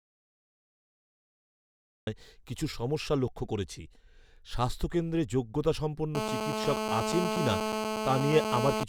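Speech clip that opens in dead digital silence, an audio dropout to silence already under way at the start and lasting until 2.07 s, likely a lost input with silence written meanwhile. From 6.15 s to 8.84 s there's a steady GSM phone buzz, a hard raspy 217 Hz tone with lots of harmonics from a nearby handset on a call, sitting at about 2 dB below the speech.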